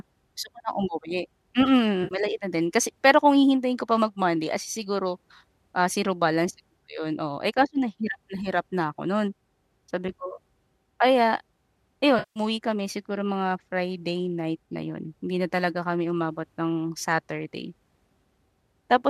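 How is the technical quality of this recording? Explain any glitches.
Two brief glitches interrupt the speech, both AAC frame loss with concealment, at 2.04 to 2.15 s (just before "na din kasi pero") and 12.19 to 12.40 s. The decoder rebuilt the missing 70 ms and 170 ms from the last good spectrum, so each gap sounds smeared and phasey rather than silent or clicky. Their sizes fit the roughly 10 ms frames of the low-delay AAC that likely carried this audio.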